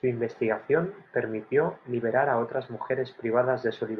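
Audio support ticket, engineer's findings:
No faults found in the speech audio for this ticket.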